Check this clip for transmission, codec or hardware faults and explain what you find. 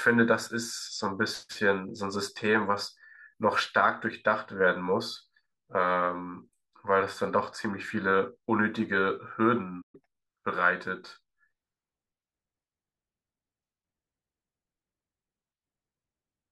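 Two related playback faults occur in this speech recording, one directly after the other, just before the ten-second mark.

Playback stall, 9.81 to 9.95 s: the speech cuts to silence in mid-flow, then resumes where it stopped. The likely cause is the player draining its buffer or having its output thread blocked, leaving nothing to send to the device until it recovers.

Catch-up at higher speed, 9.95 to 10.19 s: on resuming, the player works through its backlog by resampling at 1.5 times normal speed. Pitch rises with tempo, by around seven semitones, giving a brief chipmunk-like rush before the speech settles back to normal.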